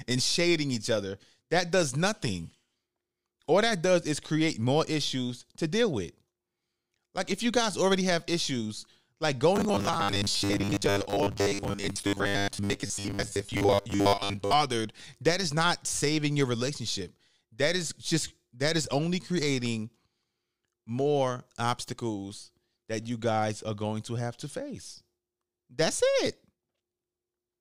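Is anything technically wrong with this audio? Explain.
Yes. From 9.56 to 14.53 s, after "already have issues like", the speech turns into robotic sound from repeated short buffers: a rigid, metallic 100 Hz buzz, likely from roughly 10 ms chunks looping for most of that stretch.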